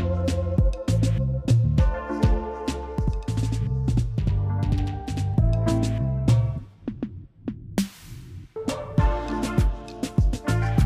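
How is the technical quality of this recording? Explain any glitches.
Technical quality is compromised by one fault. From 2.98 to 5.34 s there is a channel delay (doubling): one channel runs about 93 ms late, which fits a 4096-sample buffer, and the summed mono output carries that late copy as an equal-level slap echo trailing every sound.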